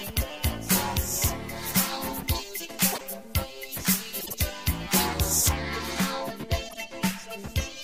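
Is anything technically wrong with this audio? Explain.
Yes, there are two kinds of fault.

Pre-emphasis left on runs from 0.0 to 5.49 s. The treble was boosted for recording or transmission, and the matching de-emphasis cut was never applied. The top end sits about 11 dB above 1 kHz at 10 kHz, which fits the standard FM 50 µs curve. The result is thin and bright, with an edgy, over-sharp top. After 5.49 s the balance returns to normal.

Frames out of order occur at 2.92 to 3.01 s, at 4.20 to 4.34 s and at 6.68 to 6.77 s. In each, two neighbouring runs of coded frames were decoded in swapped order, so a brief stretch plays with its halves exchanged. The swapped blocks are about 26 ms long in the first and last events, which fits single frames, and about 52 ms in the middle one. Each event sounds like a short garbled flutter, and no time is lost.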